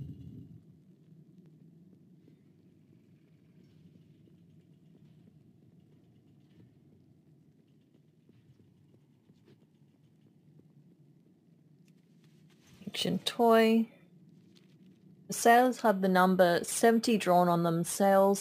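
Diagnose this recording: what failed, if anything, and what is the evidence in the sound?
A gritty, inharmonic fizz rides on the audio for its whole length, loudest on strong and bright passages and at about 25 dB below the signal. This is crude rate conversion at the sample-format conversion stage. Samples were repeated by nearest-neighbour picking, with no interpolation filter, which fits a conversion from 32 kHz up to 44.1 kHz. That uneven repeat pattern folds shifted, inharmonic copies of the material into the band.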